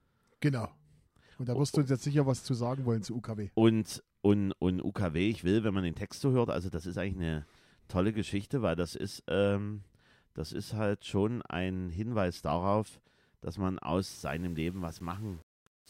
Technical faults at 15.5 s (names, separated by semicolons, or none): low bit depth without dither